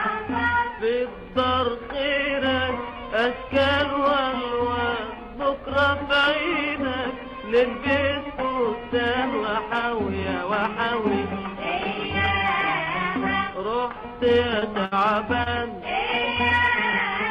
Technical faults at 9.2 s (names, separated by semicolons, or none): none